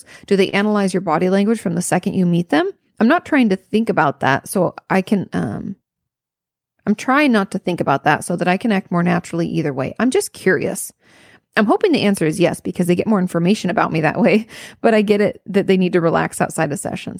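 At 0.49 s, a short stall from a late packet empties the jitter buffer. About 30 ms of sound is stretched and held, then resumes with nothing lost.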